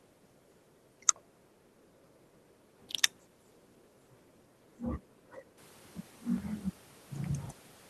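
No technical faults are audible.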